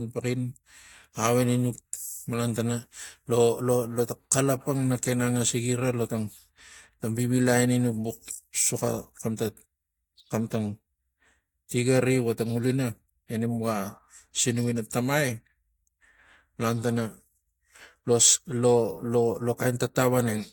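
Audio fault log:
Nothing to log here: the speech comes through without any fault worth a line.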